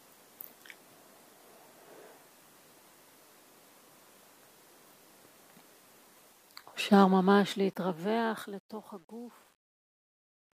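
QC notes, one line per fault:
6.17–10.57 s, truncation distortion on the fade-out: undithered coarse steps, consistent with about 11 bits, make the tail gritty from 8.09 s; the waveform shows square stairs.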